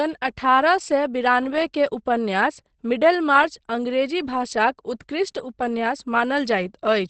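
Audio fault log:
Throughout, Opus compression: the speech comes across muffled and a bit hoarse, with nothing above about 8.5 kHz, so the top end just stops and the codec damage is plainly audible. That dull, throaty quality is likely Opus dropping into its speech (SILK) mode at wideband, which fits a low rate of around 16 kbps, where the encoder trades the upper band and fine detail for bare intelligibility.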